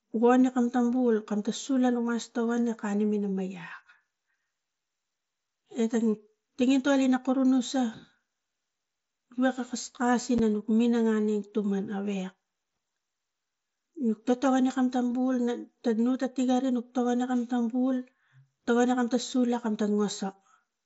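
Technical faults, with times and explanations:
10.38 s, unconcealed Bluetooth headset packet loss: the speech drops out for about 7.5 ms, consistent with a single lost frame, and the hole is filled with silence or an idle pattern rather than patched over, so both edges cut abruptly. On this mSBC link, the speech returns at full level. Unlike concealed loss, nothing is smeared or repeated into the gap, and unlike a plain click there is a real missing stretch of sound.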